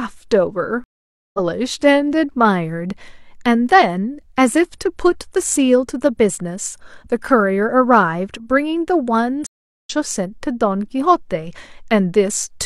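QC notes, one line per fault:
0.84–1.39 s, stream reconnect: the connection dropped and the player restarted its decoder mid-stream. The speech cuts to about 0.50 s of silence, then resumes roughly 0.4 s further on, skipping that stretch, and comes back muted or fading in.
9.47–9.90 s, stream reconnect: a second break and decoder restart. About 0.39 s of silence, with speech picking up roughly 0.3 s later than where it stopped, again with a muted or faded first moment.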